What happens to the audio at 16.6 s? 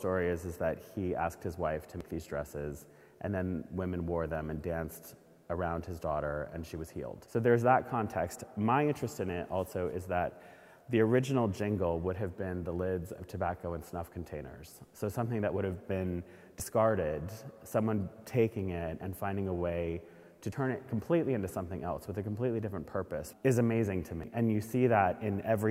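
At 16.60 s there is a sudden jump in the sound. Nothing goes silent. The audio simply skips forward, losing roughly 40 ms. This is likely a dropped buffer (overrun). The program failed to read its samples before the hardware wrote over them. That stretch was lost, and the audio on either side was butted together. The hard join and the missing slice make the skip.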